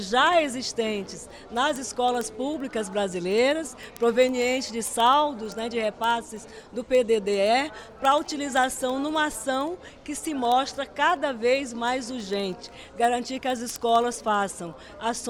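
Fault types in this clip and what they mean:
Word clock ticks: the receiving device runs on its own clock rather than locking to the sender's digital link, and the two clocks disagree by a few hundred parts per million. Each time they slide past one another, a single sample is dropped or repeated and neighbouring samples are misread. Here that produces a steady train of ticks roughly every 70 ms, around two hundred of them, running from 0.14 s to 15.25 s.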